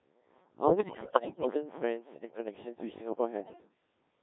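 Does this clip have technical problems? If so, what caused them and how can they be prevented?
Yes. Codec 2 vocoder damage runs throughout: the speech is rebuilt from sine waves using only pitch, voicing, energy and spectral envelope, so it sounds robotic and buzzy within a 150 Hz to 3.7 kHz band, consistent with a rate near 1.3 kbit/s. Prevent this by using a higher-rate waveform codec when bandwidth allows.

Bit errors on digital voice radio occur from 0.68 to 1.47 s and from 3.40 to 3.69 s. Roughly one bit in ten is corrupted, and each flipped bit alters a whole frame's pitch, level or spectrum, so the voice warbles and breaks into bleeps and gibberish. Prevent this by staying within solid coverage or adding stronger error protection to the link.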